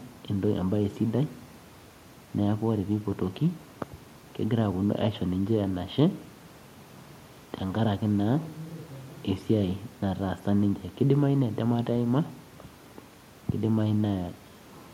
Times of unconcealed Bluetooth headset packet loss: none

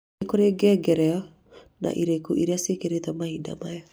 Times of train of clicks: none

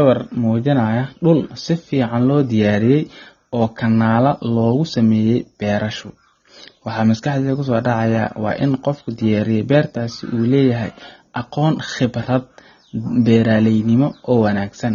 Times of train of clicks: none

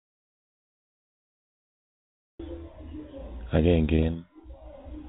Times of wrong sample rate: none

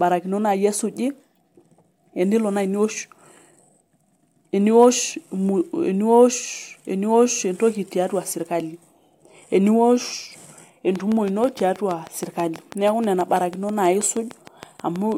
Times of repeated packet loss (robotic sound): none

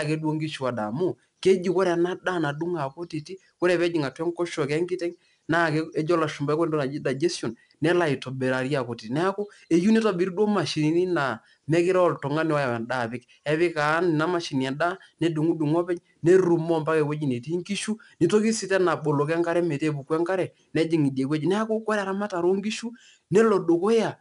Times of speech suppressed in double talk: none

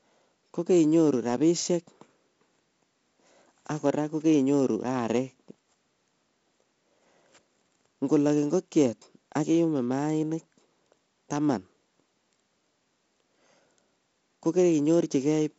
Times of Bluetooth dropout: none

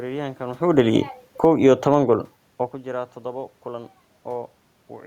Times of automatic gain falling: 1.29-2.03

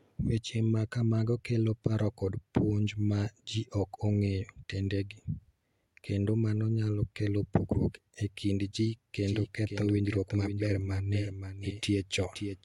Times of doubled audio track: 9.26-12.65

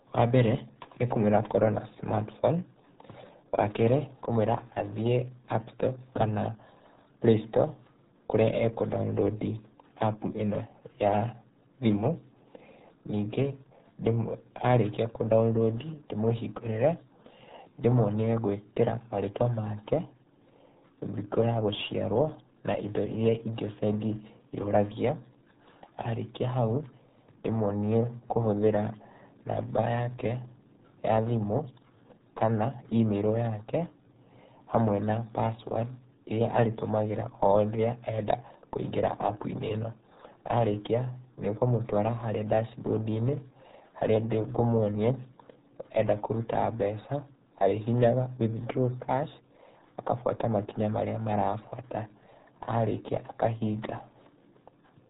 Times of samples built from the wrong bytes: none

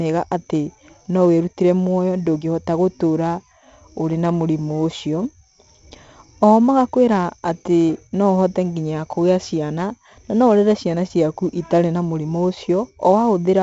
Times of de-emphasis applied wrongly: none

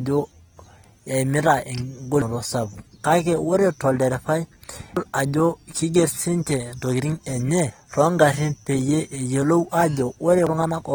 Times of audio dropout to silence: none

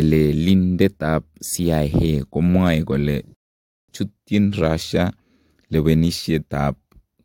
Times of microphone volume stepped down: none

